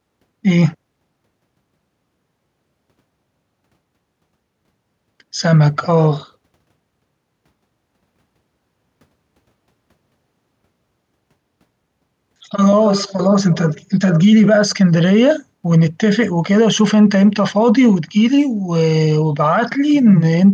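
Nothing in this speech recording stands out as a technical fault, so there's really nothing to flag here.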